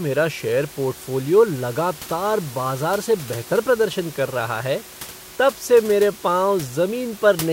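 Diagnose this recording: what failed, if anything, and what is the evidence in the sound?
Nothing in the chain has failed: the speech arrives intact and continuous, with only the room's own background noise sitting about 18 dB beneath it as part of the recorded acoustic.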